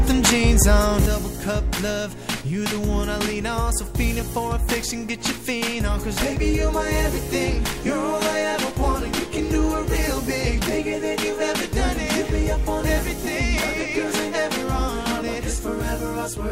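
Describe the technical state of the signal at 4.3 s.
At 4.3 s the level sits about 6 dB low, from 1.06 s to the end, likely one channel dropping out; unlike a gain drop, sound unique to that side vanishes.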